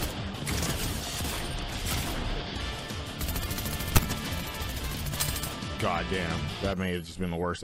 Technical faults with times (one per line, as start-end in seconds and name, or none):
3.90-4.05 corrupt frame decoded